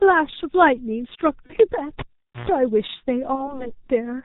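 Speech runs through the G.723.1 codec throughout: heavily muffled, hoarse, nothing above 4 kHz, consonants smeared, pointing to a rate near 6 kbit/s rather than simple low-pass filtering. VoIP packet loss concealed by the speech codec appears at 1.46–1.54 s and 3.35–3.68 s. Each is consistent with one lost 30 ms frame, heard as a fading extrapolated sound rather than a silent gap, with distortion lingering afterwards.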